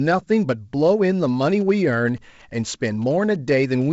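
GSM signalling bursts run from 1.24 to 3.83 s. A nearby 2G phone is exchanging short groups of radio bursts with the network, and the audio circuit rectifies them into a galloping dit-dit-dit of brief 217 Hz buzzes, sitting faintly beneath the speech.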